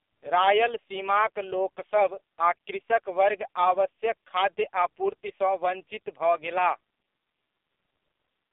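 Throughout, AMR narrowband mobile codec damage: nothing passes above 3.8 kHz, and heavy buzzy, synthetic vocal-tract coding fits a low bitrate, unlike mere band-limiting.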